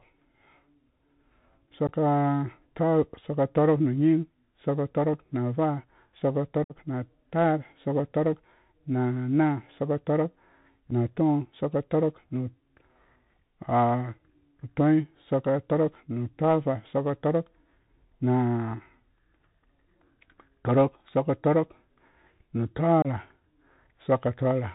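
From the start, the speech runs through a Bluetooth CVSD headset codec, and the damage is plainly audible. CVSD codes each sample as a single up-or-down bit and adapts its step size, so nothing above 4 kHz survives. Louder, brighter bits of speech outrun the step and smear into distortion, s sounds come out scratchy, and there's a grainy hiss sitting underneath throughout. All of that fits the 64 kbps narrowband headset link.

On top of that there are four spots of unconcealed Bluetooth headset packet loss. Audio packets between headset and phone went missing and were replaced with silence or an idle pattern rather than being patched over. The first, around 1.87 to 1.89 s, drops about 15 ms. The longest, 6.64 to 6.77 s, loses about 56 ms. There's a tiny 7.5 ms gap at 10.91 s, and a 26 ms gap at 23.02 to 23.07 s. Each one cuts in abruptly and can click at the edges.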